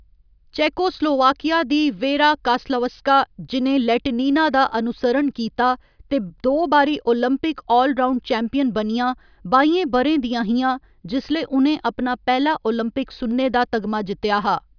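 No technical faults are audible.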